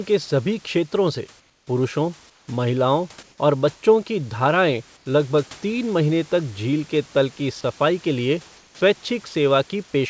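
In the pauses of this speech, the sender likely stopped transmitting under discontinuous transmission, and the receiver filled each gap with synthetic comfort noise in place of the background. The room's real background, which sits about 30 dB under the speech, is replaced by a flat, featureless hiss. This happens at 1.40–1.67 s (about 8 dB quieter), 2.30–2.48 s (about 6 dB quieter), 3.23–3.38 s between "क्षेत्रों से पुरुषों महिलाओं" and "और बच्चों की" (only about 2 dB quieter), 4.97–5.06 s just before "लगभग तीन महीने तक", and 8.57–8.81 s after "की सफाई के लिए" (about 6 dB quieter each).

At 9.29–9.35 s, the voice detector likely misjudged the sound as background and cut transmission. For 60 ms, this sound dropped by the voice detector gives way to steady comfort noise before the speech returns. Throughout, the wideband call codec stops at 8 kHz.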